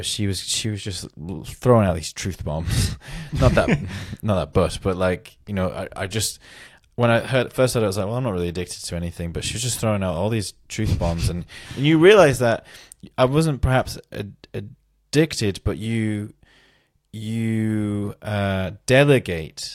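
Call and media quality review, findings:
No audible faults found in the speech recording; nothing to log against any component.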